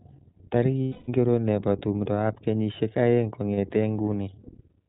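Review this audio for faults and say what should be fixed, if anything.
The whole clip carries plainly audible iLBC codec damage. Nothing above 4 kHz survives, and speech sounds rough and synthetic, which fits iLBC's 20 ms, 15.2 kbps mode. This is grainy excitation coding, not simple band-limiting.

Lost iLBC frames occur at 0.83–1.10 s (260 ms, ending just before "nebo tumdoab kenyishek aeng") and 3.54–3.58 s (40 ms, just after it). The decoder repeats the last pitch cycle with noise, giving a held, buzzy vowel instead of a silent dropout, then recovers immediately.

To prevent both, use a wideband codec at a higher bitrate over a path with forward error correction or a larger jitter buffer to cut packet loss.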